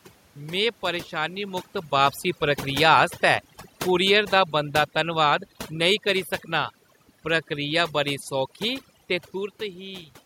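Overdone noise removal runs through the whole speech clip. The suppressor is set so aggressively that frequency bands near its noise estimate are pulled almost to nothing, taking quiet parts of the voice with them. The room noise drops and breaks up into twinkling specks.

From 1.92 s to 8.16 s the automatic gain is falling. The gain control judged the input too loud, or its background noise too strong for its starting gain, and eased its gain down by about 6 dB over those six seconds, so the voice and its residual background sink together. The talker's own distance changes, around 1.5 s and again near 9 s, are separate from this slow decline.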